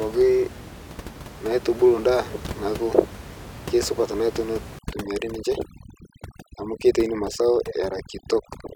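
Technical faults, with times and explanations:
4.79 to 8.76 s, overdone noise removal: a noise reducer set too aggressively cuts individual frequency bands whenever they approach its noise estimate, so the room noise, otherwise about 15 dB below the speech, drops and breaks up into twinkling specks, and quiet speech components vanish.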